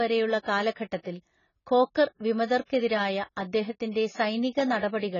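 From start to finish the speech sounds dull and smeared, with nothing above about 7 kHz, so the sibilants lose their edge and take on a fizzy, warbly texture. That's likely AAC compression, and heavy at that. Starved of bits, the encoder drops the top of the spectrum and coarsely quantises what's left, leaving gaps or noisy fill in the bands. The damage points to a very low bitrate, something like 16 kbps.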